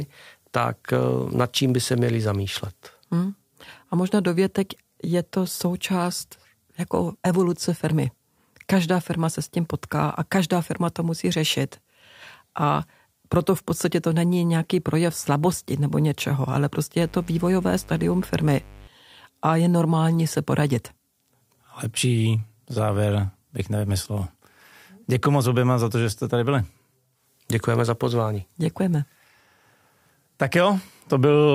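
A steady, raspy buzz sits under the speech from 17.01 to 18.87 s, roughly 20 dB below the talker, before dropping away again. This is mains buzz on a 50 Hz supply. Something such as a dimmer, a rectifier or an unshielded cable is injecting sharp switching spikes twice per mains cycle, and those spikes carry a dense stack of 50 Hz harmonics reaching into the kilohertz range, which gives the buzz its gritty edge rather than a smooth hum.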